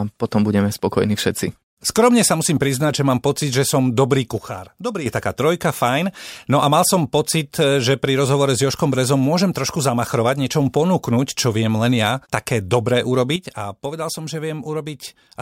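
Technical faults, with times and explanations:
4.38–5.06 s and 13.36 s to the end, sudden gain jump: right after "pocit že som dobrý" and again after "len ja také dobré", the level falls by about 8 dB in a single step, then at 5.06 s snaps back up before "je taká trojka fajn". The background noise drops and returns together with the speech, which points to a digital gain change likely applied without a ramp. That instant, noise-inclusive step is what separates it from a fade or compressor action, which would glide.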